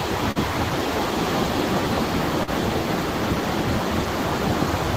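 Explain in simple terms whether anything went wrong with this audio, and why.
Two brief glitches are audible, at 0.31 to 0.37 s and at 2.43 to 2.49 s, and both are short concealed packet loss. Each time, about 40 ms of audio failed to arrive in time, so the receiver invented a stand-in by carrying the preceding sound forward and then blending back into the real signal. The result is a quick smear or wobble lasting a few hundredths of a second, where a very short sound could drop out entirely.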